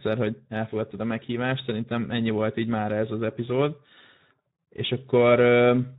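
Speech that carries plainly audible Speex codec damage from start to finish, with a rough, noisy grain in the voiced sound and only a shaped noise fill above 8 kHz. The CELP coder has few bits for its excitation here, which points to a low bitrate of roughly 11 kbps.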